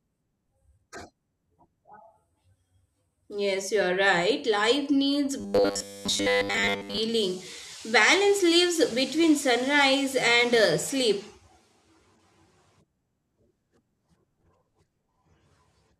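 From 5.4 to 7.0 s the speech turns into a rigid metallic buzz at 100 Hz: robotic sound from repeated short buffers, likely caused by audio arriving too seldom so that a 10 ms fragment is replayed through most of that stretch. The waveform shows identical repeating cycles, and the spectrogram shows evenly spaced harmonic lines.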